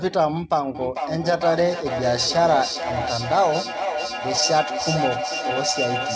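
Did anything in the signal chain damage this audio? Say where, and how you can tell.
Yes. At the call-processing stage, an acoustic loop formed: two devices in the same room on one call, so the loudspeaker's output re-entered the microphone with net gain on each pass. From 0.75 s to the end, repeats build rather than decay and narrow to a feedback howl near 700 Hz, peaking about 6 dB below the speech and pulsing roughly every 400 ms, the round-trip delay of the loop. Content above 8 kHz is absent, which fits the G.722 call codec.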